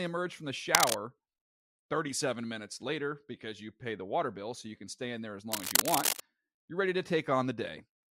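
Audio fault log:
0.71–0.98 s (after "emerge from the") and 5.52–6.20 s (after "stay in there as", before "you're ready to"), cable scratch noise: dense, uneven rustling bursts sit a little above the speech, likely from a worn cable or connector being moved. They come in irregular clusters rather than isolated clicks or gaps, which separates them from crackle or dropouts.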